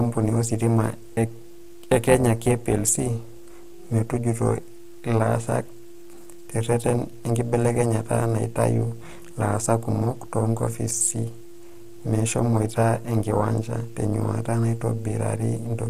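From start to finish the speech sounds rough and grainy, with noise between harmonics, which points likely to low-delay AAC compression (AAC-ELD) at a low bitrate near 32 kbps. Throughout, the level also ripples by about 11 dB at around 300 Hz, giving a metallic buzz with extra tones: overlap-add ripple from frames rejoined with uneven overlap gain.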